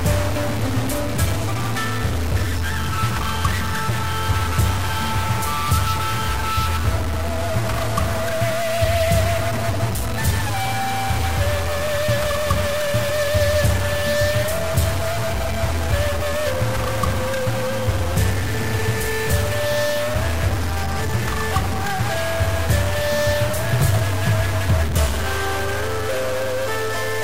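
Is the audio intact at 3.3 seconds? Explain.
No. At 3.3 seconds the audio carries harsh, buzzy distortion that runs through the whole clip, likely a stuck bit. One data bit holds a fixed value, knocking about half the samples off by a step around -20 dBFS. Unlike clipping, the grit persists at low levels, and pauses fill with noise.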